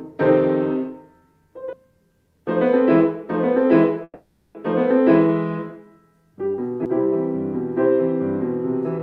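At 1.73 s there is a CD skip: a tick from a mute of only a few milliseconds, after which playback resumes from another turn of the disc's spiral, so the sound jumps forward or back rather than pausing. The same happens at 6.85 s. A bumped or flawed disc made the laser lose its track and land elsewhere. Unlike a dropout, time does not stop; a stretch of the material is skipped or repeated.

From 4.04 to 4.57 s the audio stalls in a call audio freeze. The last sound is held and smeared into a fading buzz for about half a second, and the final 40 ms are silent before the sound resumes exactly where it stopped. Nothing is lost; instead 510 ms is inserted and everything after arrives that much later. The likely cause is packets delayed in transit, leaving the jitter buffer empty. This differs from the CD skip, which cuts or repeats part of the material instead of stretching time.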